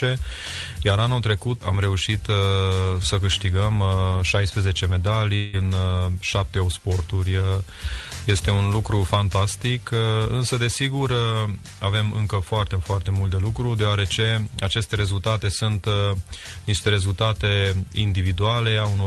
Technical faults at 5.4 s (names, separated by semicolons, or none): long network dropout